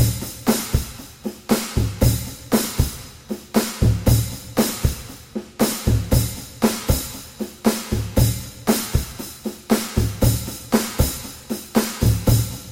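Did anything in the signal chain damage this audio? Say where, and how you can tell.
No, nothing in the chain audibly damaged it.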